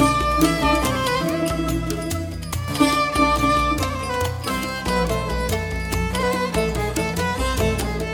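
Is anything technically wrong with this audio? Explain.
No, nothing technically wrong turns up in this music clip.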